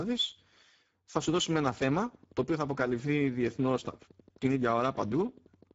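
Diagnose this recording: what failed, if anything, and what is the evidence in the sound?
Speex codec damage runs through the whole recording and belongs to the codec stage. The speech is plainly hoarse and noisy, and nothing is present above about 7.7 kHz. Speex is a CELP coder that rebuilds speech from a coarse vocal-tract model plus a coded excitation. At this setting, which points to a rate near 10 kbps, the excitation gets too few bits, so what should be clean voicing comes back rough and noise-like.

A train of clicks begins at 1.3 s and continues to 5.72 s, at a steady 11.8 per second, roughly fifty in all. The clicks are alike in shape, about as loud as the speech itself, and they keep ticking through the pauses. That rules out anything driven by the signal. A regular pulse being added on top of the audio most likely comes from electrical interference or a struggling interface in the analogue wiring or converter stage.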